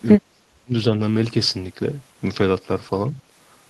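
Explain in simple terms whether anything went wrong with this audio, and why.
From 0.16 to 0.74 s, the speech drops sharply, almost to silence. This is speech suppressed in double talk, likely from an echo canceller muting this side's voice along with the loudspeaker echo.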